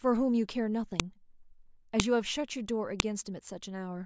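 At 1.00, 2.00 and 3.00 seconds, the speech is broken by a sharp, loud click. Each is a file header played as audio. The clip appears to be built from one-second WAV pieces joined end to end. Each piece kept its header. Those few dozen bytes are read as sample values. They form a brief burst unrelated to the speech. So a snap lands on every one-second boundary, whatever the speech is doing at that moment.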